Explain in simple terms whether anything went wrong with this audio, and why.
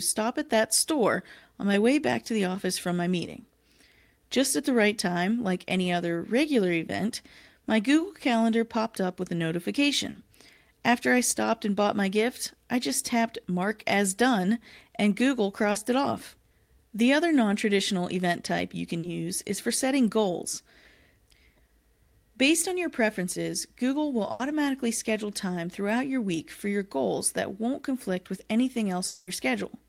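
Three brief blips at 10.11 s, 15.71 s and 18.99 s are short concealed packet loss: 40 ms of the call arrived too late, and the receiver bridged each gap with a smeared continuation of the speech.

From 24.31 to 24.42 s, a burst of packet loss leaves an 80 ms hole. The receiver stretches the last sound into a fading buzz or hiss, and then the speech jumps ahead.

From 29.07 to 29.30 s, about 0.2 s of speech is replaced by a fading continuation of the previous sound, with no true silence. Speech resumes with that stretch missing. The likely cause is a long network dropout.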